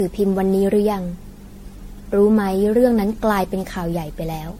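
From start to finish, the speech carries generation loss. It sounds swirly, hollow and smeared, and consonant attacks blur. The likely cause is repeated lossy coding. The sound points to MP3 applied around ten times over, with each pass quantising afresh on a shifted frame grid. Noise and spectral holes pile up from pass to pass. The damage is worse than a single encode would leave, though the band limit fits 64 kbit/s. Nothing is heard above 16.5 kHz.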